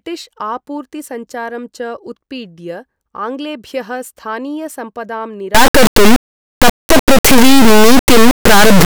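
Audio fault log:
5.55–8.85 s, integer read as float: from 5.55 s to the end, the speech turns into a violent, buzzing square-like roar far louder than the preceding audio. The sample data appears to have been written as 32-bit integers but interpreted as 32-bit floats, so each integer bit pattern decodes to a meaningless value, either vanishingly small or enormously beyond full scale. The output therefore slams between near-silence and the clipping ceiling, producing the harsh rectangular buzz, with dropouts where the source is very quiet.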